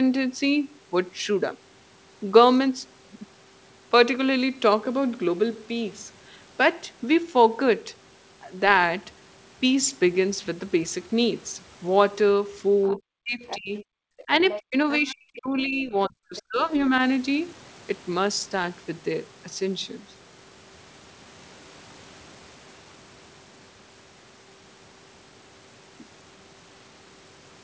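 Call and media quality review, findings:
Other side's voice leaking through at 12.83–12.99, 13.47–13.84, 14.18–14.60, 14.93–15.39 and 16.36–16.42 s. Second voice, roughly 10 to 25 dB under the talker. Likely residual loudspeaker echo the canceller failed to remove.

Speech suppressed in double talk at 12.94–13.72 and 14.25–16.92 s. Talker drops by as much as 40 dB while the far end talks. Likely the echo canceller is attenuating both voices.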